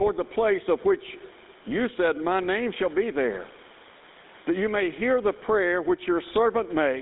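From start to finish the speech sounds squashed, with the quiet room noise about 37 dB below the speech and the gain swinging by roughly 10 dB. This gain pumping likely comes from input gain set far too high, with a fast limiter clamping each peak.

Also throughout, the speech has a buzzy, gravelly roughness and a thin, telephone-like tone, confined to roughly 250 Hz to 3.7 kHz with nothing above 3.8 kHz. The damage is plainly audible and fits a 13 kbps GSM full-rate codec, which rebuilds the voice from a coarse vocal-tract model and a sparse pulse excitation.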